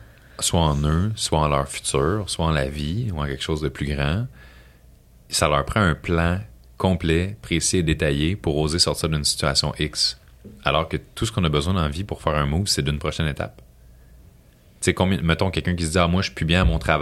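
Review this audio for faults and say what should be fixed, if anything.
Nothing needs fixing; no faults are audible.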